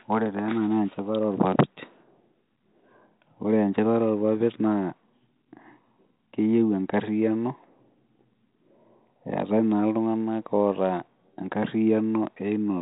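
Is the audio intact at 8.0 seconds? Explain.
Yes, the audio is intact at 8.0 seconds, with the speech passing cleanly through the 32 kbit/s G.726 ADPCM path and nothing heard above about 3.9 kHz.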